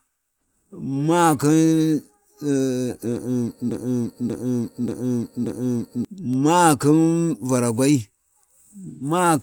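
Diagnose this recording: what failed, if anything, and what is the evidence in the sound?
The playback or streaming stage most likely stalled and kept re-sending the last fragment it held, producing a broken-record loop. From 3.71 s to 6.05 s, a 0.58 s piece of speech repeats exactly, back to back, four times. Because the stalled stage kept replaying its buffer instead of advancing, the speech that should have filled those two-plus seconds never arrives. When the loop breaks, the speech resumes from a later point.

The codec stage shows AAC frame loss with concealment between 8.88 s and 9.04 s. About 128 ms of coded audio is missing, which fits three dropped frames. The decoder covered the gap by rebuilding the spectrum from the last good frame, with randomised phase or interpolated energy instead of the real signal. The speech there turns into a brief smeared, noisy or phasey patch rather than a clean dropout.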